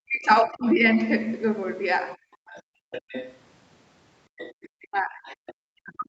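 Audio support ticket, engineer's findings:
Speech suppressed in double talk: talker's level drops by up to roughly 40 dB at 0.00–0.84 s, briefly at 2.17–2.23 s (about 30 dB), and from 4.77 s to the end. Likely the echo canceller attenuating both sides during simultaneous talk. The near voice itself is lost, not just room tone.

Other side's voice leaking through: a second, fainter voice at 2.47–3.37 s (about 15 dB under talker), 4.38–4.69 s (about 20 dB) and 5.29–5.54 s (about 25 dB). Likely residual loudspeaker echo the canceller failed to remove. Extra voice added, unlike the suppression dropouts.

Background gated by the echo canceller: room tone falls about 32 dB at 2.63–2.91 s, roughly 0.3 s, then returns. The canceller clamps the mic while the far end plays, inside the leak window at 2.47–3.37 s. Band limit of 8 kHz across the clip is consistent with the Opus call path.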